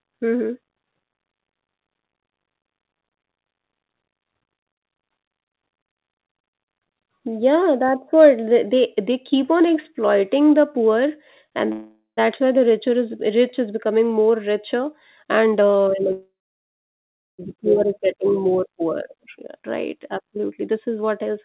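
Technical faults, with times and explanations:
11.72–12.19 s, call audio freeze: the last sound stretches into a fading buzz, then about 0.14 s of silence, and the audio resumes intact, likely from delayed packets draining the jitter buffer.
14.79–16.04 s, jitter buffer speed-up: the audio runs at 127% speed with unchanged pitch, as the receiver trims pitch-period slices, roughly 0.3 s in all, to cut surplus delay.
16.12–17.40 s, call audio freeze: a 1.26 s gap, a brief fading buzz then about 1.08 s of silence, after which the audio continues with nothing lost.
18.68–21.34 s, jitter buffer speed-up: a gentler 106% speed-up at steady pitch, with around 0.15 s of short pitch periods removed, so the sound runs slightly hurried.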